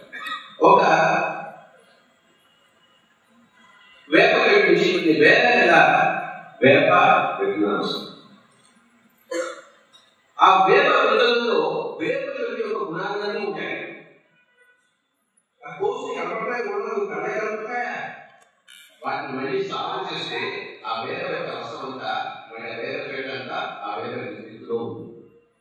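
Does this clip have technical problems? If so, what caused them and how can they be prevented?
Yes. Zipper noise runs from 10.83 s to 12.23 s. The level falls by about 15 dB there. The fall happens in coarse steps, around 150 a second. Each step jumps the gain without smoothing, so each leaves a tiny click. Together they make a fast ticking that rides on the sound until the drop ends. To prevent it, ramp the gain per sample across each step.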